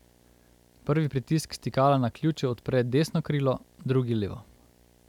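From start to finish the speech carries video or display buzz, a steady 60 Hz buzz with a fizzy hash riding above it, sitting roughly 35 dB below the speech. A screen or video cable near the audio path has coupled its picture field rate into the signal. The sharp edges of that interference give it the harsh, spiky character rather than a smooth hum.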